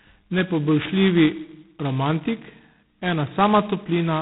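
From start to finish the speech carries G.726 ADPCM damage, and it is heavy. The band stops at 3.9 kHz, leaving the telephone-narrow sound with no air above it. Each sample is coded as a coarse difference from a running prediction, and with so few steps the prediction error turns into a harsh, rasping hiss that swells with loud syllables and sinks in quieter ones. That grain points to 2-bit operation at 16 kbit/s.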